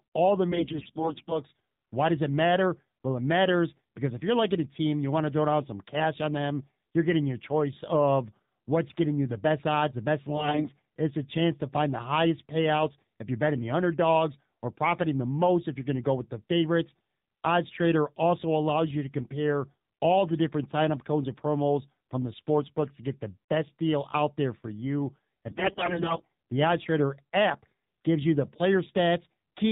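Speech recorded through the AMR narrowband mobile codec: nothing above 4 kHz survives, and at what sounds like a 7.4 kbps mode the voice is plainly buzzy and synthetic. That excess buzz and smearing is what separates it from a simple telephone low-pass filter, which would only dull the sound. Three stretches carry AMR bit errors: 0.52 to 1.40 s after "all the", 10.36 to 10.72 s after "best odds the best", and 25.50 to 26.32 s after "out there for you". The bit error rate grows from about 10% in the first to about 20% in the last. Pitch and loudness hold, but the voice turns hoarse, scratchy and gargly as flipped bits misplace the codec's excitation pulses. There are no gaps or repeats, which rules out lost packets.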